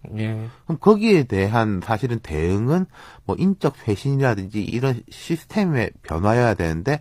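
Speech with repeated frames at 4.65 to 4.70 s: a 46.4 ms slice plays twice, which points to one compressed frame sent again, causing a brief stutter and lengthening the audio by 46.4 ms. A spectrogram shows two identical adjacent blocks, often with a vertical seam between them.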